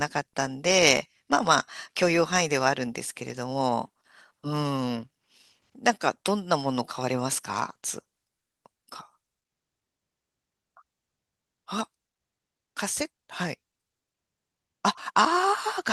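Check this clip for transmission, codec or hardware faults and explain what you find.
No transmission, codec or hardware faults.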